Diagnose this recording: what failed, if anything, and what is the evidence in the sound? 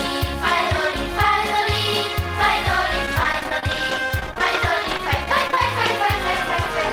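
Network side: repeated packet loss (robotic sound) from 3.06 to 5.90 s. A rapid string of short dropouts, none over 28 ms, each patched by stretching the previous sound, gives that choppy texture with pieces missing.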